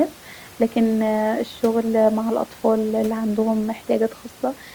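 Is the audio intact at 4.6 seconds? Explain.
Yes, the audio is intact at 4.6 seconds, with only the room noise about 27 dB below the speech audible underneath.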